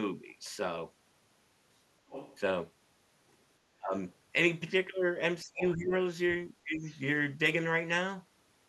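Around 2.08 to 2.39 s a second voice sits faintly under the speech, roughly 15 dB down. That's the other side's voice leaking through, most likely from a loudspeaker on the talker's end that the echo canceller didn't fully scrub from the mic.

At 3.78 to 3.93 s the talker's own speech suddenly sinks, by something like 25 dB at the deepest point, for about a sixth of a second. That's speech suppressed in double talk: both sides were likely talking at once, and the canceller, unable to tell its own talker from the echo, pulled the whole signal down. It happens again from 5.43 to 5.92 s, this time covering around 0.4 s of speech with a similarly deep dip. Inside that stretch, at 5.58 to 5.68 s, the far voice pokes through at roughly 10 dB under the talker, so the leak and the suppression are tangled together there.

Near the end there's a milder version. From 6.75 to 6.84 s the speech dips only a few decibels, and right after, at 6.85 to 6.99 s, a very faint trace of the other side comes through, about 30 dB down and easy to miss.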